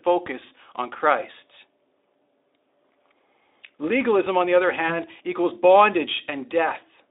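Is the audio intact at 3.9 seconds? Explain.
Yes, at 3.9 s the speech is intact, with no fault at that moment.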